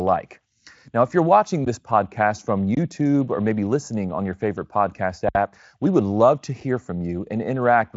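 Underrun with held sample hits this speech clip at 1.65 s, after "if you're watching", again at 2.75 to 2.77 s, before "or maybe listening on", and at 5.29 to 5.35 s, between "on your favorite podcast" and "we would love to". Each time the output buffer runs dry and the converter freezes on its last value, so the sound flatlines for roughly 17, 21 and 64 ms. Nothing is lost, so playback resumes where it halted with only a soft seam. The 21 ms gap fits a 1024-sample buffer at 48 kHz. Speex carries it with little audible damage and nothing above 7.6 kHz.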